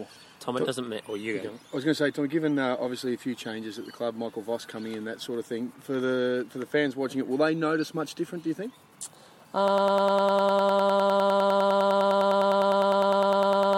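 At 9.68 s the audio snaps into a broken-record loop: a tiny slice, about 101 ms long, repeats exactly, back to back, roughly 40 times, and it never breaks free before the clip ends at about 14 s. It comes across as a fast stutter with nothing new getting through. The player, encoder or stream likely stalled and kept resending the last fragment it held, so whatever should have played in those final four seconds is simply gone.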